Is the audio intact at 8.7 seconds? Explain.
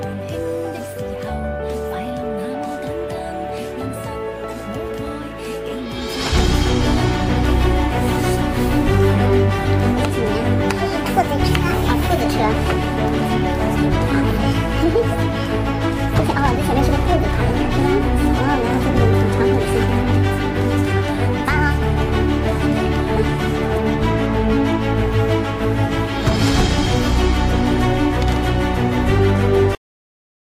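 Yes, the audio is intact at 8.7 seconds, with no dropout, click, distortion or other fault audible at that moment.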